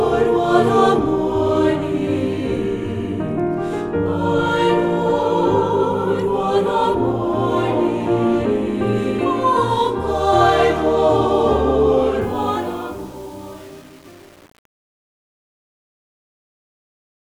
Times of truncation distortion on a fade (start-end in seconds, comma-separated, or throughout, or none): 12.21-17.36